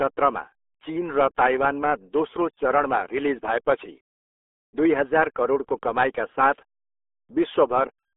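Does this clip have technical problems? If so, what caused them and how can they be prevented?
Yes, there's RealAudio 14.4 codec damage across the whole clip. The speech is muffled and gargly, with nothing above 3.8 kHz and the band squeezed to roughly 300 Hz–3.5 kHz, which fits RealAudio 1 at 8 kbit/s. Work from an uncompressed or modern high-bitrate source instead.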